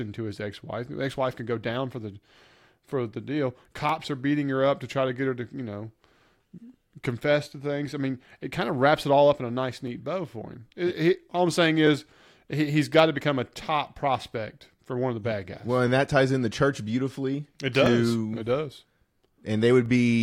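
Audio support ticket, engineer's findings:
Clock drift buffer slips, 1.90 to 19.86 s. Regular click about every 1.99 s, around ten in all, during speech. Likely independent device clocks, roughly 300 ppm apart. Buffer drifts until a block of a few dozen samples is dropped or repeated.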